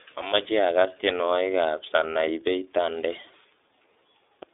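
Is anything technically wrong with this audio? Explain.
Yes. Throughout, the speech carries iLBC codec damage: band-limited to roughly 300 Hz to 3.6 kHz, coded in independent 30 ms frames (fitting the 13.33 kbps mode), giving a rough, synthetic edge. A spectrogram shows nothing above 3.6 kHz.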